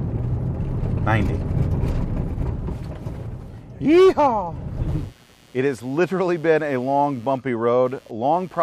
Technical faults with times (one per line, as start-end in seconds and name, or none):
4.89-8.62 computer activity noise